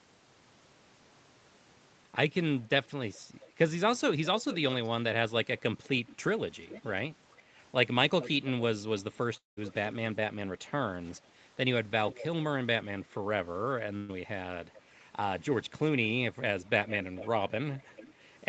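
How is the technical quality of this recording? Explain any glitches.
The recording has two glitches, both gaps where part of the speech never arrived.

From 9.37 to 9.59 s, a long network dropout likely cut off incoming audio; about 0.2 s is lost, covered by a fading buzz or hiss that sinks into near-silence before speech resumes.

From 13.97 to 14.11 s, a burst of packet loss removed about 120 ms; the receiver stretched the last sound into a brief fading buzz or hiss, then jumped ahead.

The call codec limits the sound to nothing above 8 kHz.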